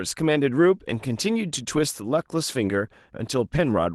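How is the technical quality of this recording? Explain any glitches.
No glitches or faults are audible in this recording.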